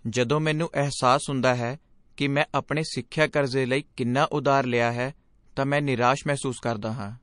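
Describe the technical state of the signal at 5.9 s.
At 5.9 s the speech sounds watery and swirly, with dull, clipped treble and sibilants that chirp metallically as faint high detail flickers in and out, and consonant onsets smeared. This persists through the whole clip. It is likely MP3 compression, and the plainly audible damage fits a low bitrate of around 40 kbps: starved of bits, the encoder cuts off the top band and drops quieter frequency lines that then come and go between frames.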